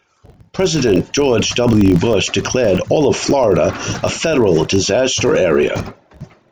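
Throughout the speech, a low buzz at about 46.9 Hz rides under the sound, rising and falling with its level. This is a filter restarted on every block: the filter discards its internal state at each block boundary and starts from silence, so every block opens with a small transient. The repeat rate fits a 1024-sample block, and the ticks merge into a steady buzz that fades whenever the speech drops away.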